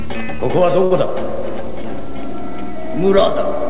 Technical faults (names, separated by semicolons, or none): short stall from a late packet